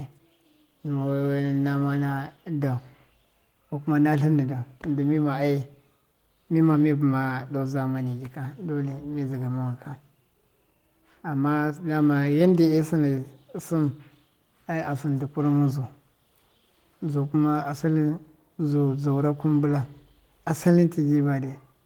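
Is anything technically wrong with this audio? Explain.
No, nothing technically wrong stood out on listening to this speech recording.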